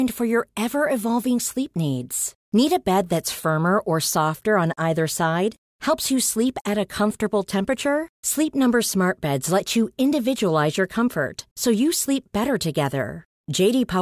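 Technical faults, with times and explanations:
No technical faults can be heard in the speech. There is nothing to list with a time or an explanation.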